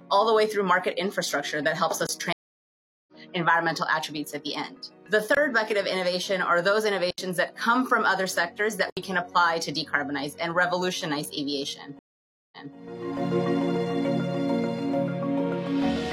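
Blocks of digital silence cut the audio at 2.07–2.09 s and 5.35–5.37 s (23 ms each, which fits a 1024-sample buffer), and at 7.11–7.18 s and 8.90–8.97 s (75 ms and 70 ms). Each drops abruptly to silence and back with no fade. Two stream reconnects differ because the audio does not pick up where it left off. At 2.33–3.13 s there is 749 ms of silence, after which the sound resumes roughly half a second later. At 11.99–12.75 s there is 528 ms of silence, and the sound resumes 232 ms earlier, repeating material.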